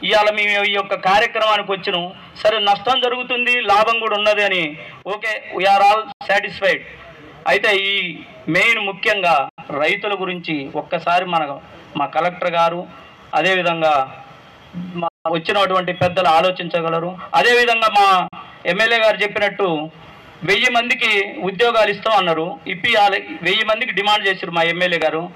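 Digital broadcast dropouts cut the sound at 6.12 to 6.26 s, 9.49 to 9.63 s, 15.08 to 15.30 s and 18.28 to 18.38 s. Each time, the receiver stopped getting decodable frames and muted with a fade of about 3 ms, so the sound vanishes almost abruptly and returns later in the programme. The missing stretches of roughly 43, 85 and 171 ms fit the loss of one, two or four frames, and whatever was sent in those gaps is gone.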